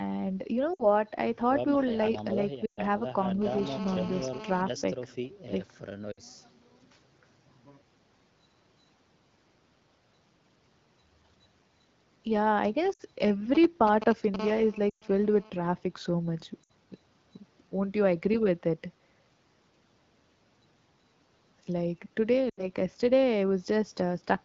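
This speech clip, carried over clear wideband HD Voice (AMR-WB), has seven short stretches where the voice drops toward near silence and then returns weak or rough: 0.74–0.88, 2.66–2.80, 6.12–6.20, 12.93–13.02, 14.90–15.04, 16.63–16.70 and 22.50–22.68 s. These are lost AMR speech frames. When radio errors corrupt frames, the decoder keeps repeating the last good pitch and vocal tract settings while fading the gain. The roughly 60 ms gaps fit three 20 ms frames, and the 120 ms gaps at 2.66 and 14.90 s fit six, long enough for the sound to nearly die away. From 3.42 to 4.62 s a hard, raspy buzz, about 14 dB below the speech, sits under the audio, stopping and starting irregularly. This is GSM phone buzz from a nearby 2G phone moving data. Its 217 Hz transmit bursts are rectified in the audio circuit, producing that fundamental with dense harmonics. From 14.39 to 15.50 s the same buzz returns steadily at about 17 dB down, as a phone in a call would produce. 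It overlaps the dropout at 14.90 s. Just before it, from 13.55 to 14.36 s, comes a galloping dit-dit-dit of short 217 Hz buzzes nearly as loud as the speech. These are GSM signalling bursts, the brief transmission groups a 2G phone sends, for instance before a call or a text arrives.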